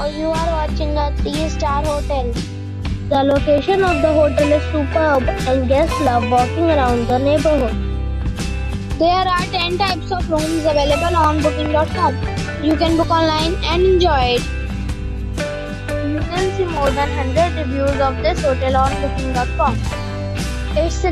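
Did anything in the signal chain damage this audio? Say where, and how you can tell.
Yes. Two loud pops stand out, one at 9.90 to 9.92 s and another at 11.66 to 11.68 s. Each is a single sharp click lasting under 30 ms and peaking roughly 10 dB above the surrounding sound, which carries on uninterrupted beneath it. The likely cause is in the analogue wiring: a brief voltage step, such as from a switch, a connector or a static discharge, added to the signal and then shaped into a short transient by the stages that follow.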